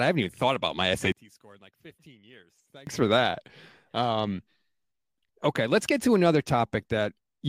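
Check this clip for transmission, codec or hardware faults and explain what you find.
One fault stands out in this speech clip, a stretch where the voice nearly disappears.

From 1.12 s to 2.87 s, after "even thought about my" and before "for that", the speech drops by about 26 dB to a faint trace. This is likely one channel inverted: with one stereo side's polarity reversed, the centred voice cancels when summed to mono, leaving only the small difference between channels. The waveform shows a sharply shrunken envelope across that span, and the spectrogram shows the energy abruptly fading.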